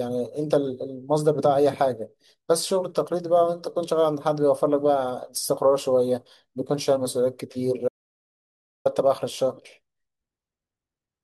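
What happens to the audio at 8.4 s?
The input feed was likely lost, through a disconnected device or a failed link, while the recorder kept writing silence. That is an audio dropout to silence from 7.88 to 8.85 s: the speech cuts off mid-flow into dead silence, with no room tone, and about 0.97 s is gone.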